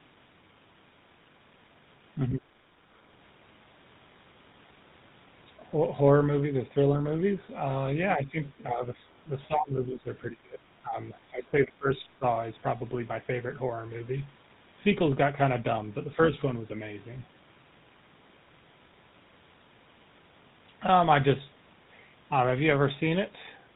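From the start, the speech carries the gravelly buzz of the GSM full-rate codec, at 13 kbps. The codec models the vocal tract and excites it with a coarse pulse train. Much of the fine excitation detail is thrown away. Nothing above 4 kHz survives, so sibilants are dull. The roughness is plainly audible throughout.

Between 8.16 and 12.25 s the speech dips repeatedly. This is likely speech suppressed in double talk. The dips fall at 8.16 to 8.38 s, 8.58 to 8.85 s, 9.3 to 10.09 s, 10.3 to 10.96 s and 11.3 to 12.25 s. The first two are shallow, around 10 dB and 5 dB. The later ones sink much deeper, to about 25 dB at worst. An echo canceller, unable to separate the talker from far-end echo, pulls the level down. The voice thins and drops out in pieces.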